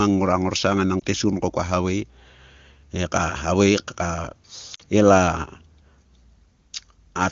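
Speech carried over AMR wideband at what sounds like a high rate, with two lost AMR speech frames: a brief dip at 1.00 to 1.03 s between "ngora ngorsang enang" and "tiesgun ko kua havae", fitting one concealed frame, and a longer dip toward near silence at 4.75 to 4.82 s, consistent with two frames, where the decoder repeated prior settings at falling gain.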